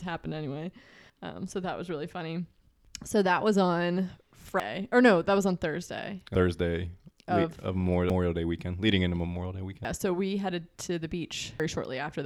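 At 1.10, 2.85, 4.60, 6.35, 8.10, 9.85 and 11.60 s the speech jumps ahead, with about a third of a second gone each time and the edges butted together. The steady spacing points to audio missing between chunks, likely a recorder dropping material at each 2-second chunk boundary.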